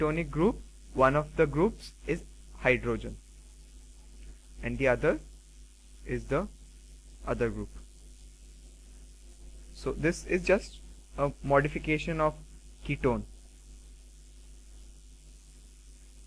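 No technical faults can be heard anywhere in this recording.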